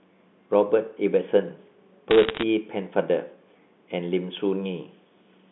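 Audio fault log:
2.11–2.43 s, bit errors on a digital phone line: a bit error rate of roughly 0.7 percent flips bits in single mu-law samples. Hits on high bits, or on the sign of loud samples, sound as sharp ticks, crackling over unchanged speech. The waveform shows isolated one-sample spikes, and the spectrogram shows thin vertical lines across the telephone band up to 3.6 kHz.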